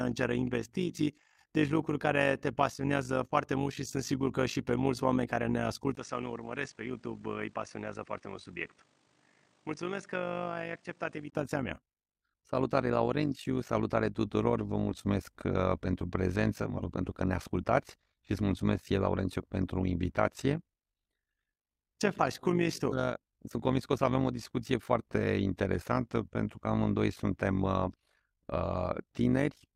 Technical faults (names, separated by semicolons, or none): overlap-add ripple; input switched to a poorer device